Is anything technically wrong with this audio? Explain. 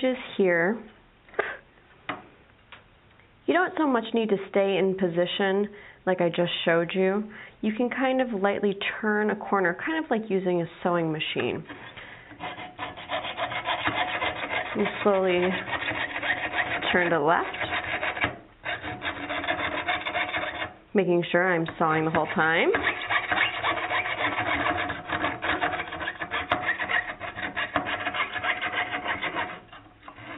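No, nothing technically wrong turns up anywhere in this one, so there's nothing here to flag.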